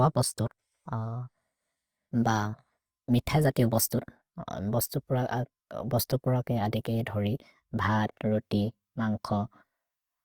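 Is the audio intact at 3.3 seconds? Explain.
No. At 3.3 seconds, as throughout the speech, the likely cause is Opus compression in its music mode at a rate that points to about 24 kbps. Starved bands are refilled with folded or noise content, leaving the sound plainly grainy and rough despite reaching 20.2 kHz.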